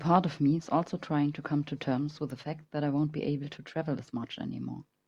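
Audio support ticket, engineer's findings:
Electrical switching spike at 2.30 s. Single sharp snap, roughly 5 ms, sitting on top of the speech, quiet at around -35 dBFS. Likely source: nearby switch, relay, motor or static discharge arcing, with the burst coupling into the audio line and adding a brief transient. Check grounding, cable routing near switched loads, and shielding.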